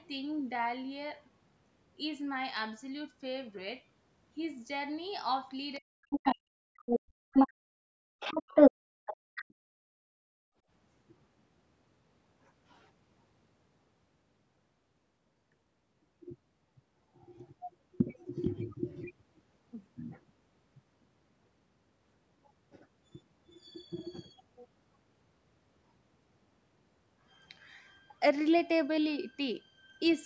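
From 5.79 to 8.88 s the talker's speech sinks and breaks up, falling by roughly 40 dB at its deepest across about two seconds in total. This is likely speech suppressed in double talk, the echo canceller muting both voices at once. On the waveform the envelope collapses into thin fragments, and the spectrogram shows the harmonics fading in patches.

Inside that stretch, a second voice breaks through at 6.1 to 6.35 s, 6.86 to 6.99 s, 7.34 to 7.49 s and 8.2 to 8.72 s. It is about 5 dB above the talker in the first two bursts, about 10 dB above at the third, and about 15 dB above at the fourth. A final burst at 9.06 to 9.53 s sits about 5 dB below the talker. These scraps are likely the other side's voice leaking through, loudspeaker sound the canceller failed to remove. They appear as short islands of a separate harmonic pattern, capped like everything else at 8 kHz by the call processing.

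From 9.17 to 10.65 s the background is gated by the echo canceller. The room tone drops by up to about 35 dB for roughly one and a half seconds and then returns. The waveform shows the noise floor flattening almost to silence, and the spectrogram shows a dark blank band across all frequencies.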